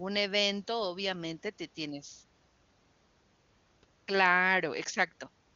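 No faults are audible in the speech, and the AMR wideband (HD Voice) coding sounds like one of its upper rates, with the band up to 7 kHz present and at most a faint coding texture rather than the raspy roughness of the low modes.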